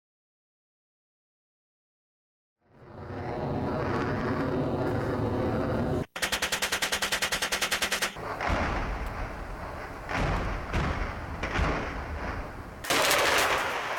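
A rough, metallic edge rides on the sound throughout, absent in silence and present through the fade-in ending at 3.85 s. This is periodic clock jitter: interference at around 3 kHz puts sidebands on every component.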